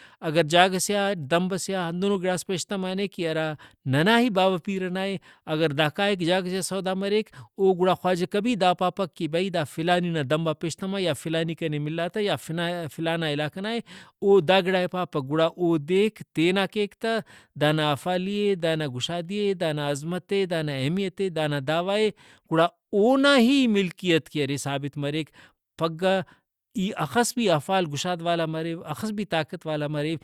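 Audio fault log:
No fault heard anywhere in this speech recording.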